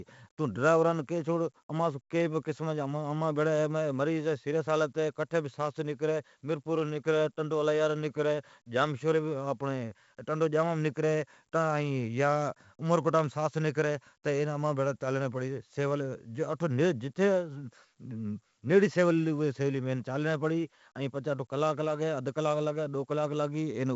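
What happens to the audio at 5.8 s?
At 5.8 s the speech is coded with 4-bit ADPCM compression, as it is through the whole clip. Each sample is only a coarse predicted step, so heavy gritty hiss rides every loud syllable, attacks smear, and nothing above 7.7 kHz survives, which fits a 64 kbps stream.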